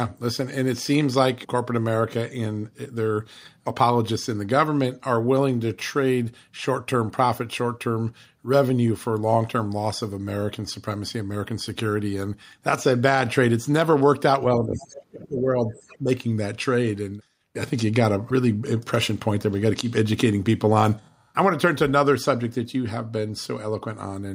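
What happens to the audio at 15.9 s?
At 15.9 s a faint second voice sits underneath the talker, from 15.70 to 15.98 s, very low, on the order of 30 dB below the main speech. This is the other side's voice leaking through. The other party's audio, played on the talker's loudspeaker, was likely picked up again by the microphone, and the echo canceller did not fully remove it, so scraps of it ride along in the outgoing signal.

Right after, from 15.98 to 16.09 s, the talker's own voice briefly dips by roughly 10 dB for about a tenth of a second, sounding momentarily ducked and pulled back. This is speech suppressed in double talk. With both sides sounding at once, the echo canceller likely could not tell the talker's voice apart from the loudspeaker echo, so it turned the whole signal down, taking the wanted speech with the echo.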